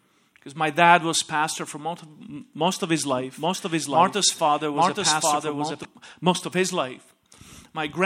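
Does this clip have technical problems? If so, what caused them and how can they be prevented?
Yes. From 3.17 to 5.85 s, just after "most of his", a doubled audio track appears: a second full-band copy, about as loud, trails by roughly 0.7 s. The likely cause is a slower second capture path or misaligned edit. Unlike an echo, it starts and stops abruptly, with no decay or room colour. Prevent it by monitoring or routing only one input path into the recording and checking edits for overlapping copies.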